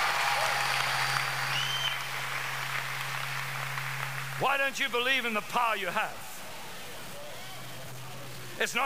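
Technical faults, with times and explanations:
throughout, low bit depth without dither: the audio carries a coarse, grainy distortion that tracks the sound, roughening quiet passages and leaving the faintest parts to sputter between adjacent levels or drop out to silence. This is likely the result of truncating to about 6 bits with no dither, so the rounding error stays correlated with the signal instead of becoming a steady hiss. That error sits only around 15 dB below the sound itself.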